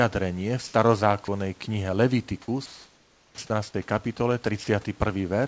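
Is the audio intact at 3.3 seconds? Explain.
No, 3.3 s falls inside a clipped start after a pause, running from 3.18 to 3.36 s. After the 0.42 s gap, the output device dozes off and takes about 180 ms to wake, so the speech bursts in abruptly with its opening sounds missing.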